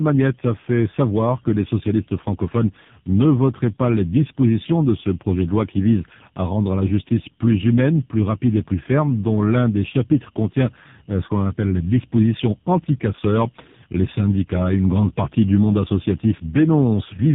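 All the way through, this speech carries tandem speech coding: it sounds coded twice in a row, which fits a GSM full-rate leg feeding a low-rate AMR-NB stage. Each coder chews on the other's leftovers, so it's rough, muffled and warbly, with nothing above 3.8 kHz.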